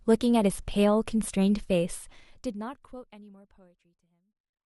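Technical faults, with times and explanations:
No technical faults can be heard in this speech.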